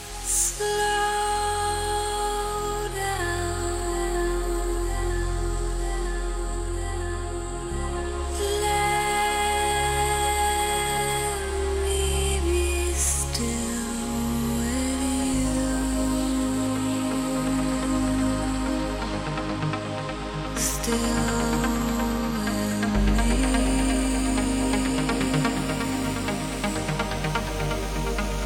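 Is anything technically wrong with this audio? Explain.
No, nothing technically wrong stood out on listening to this audio.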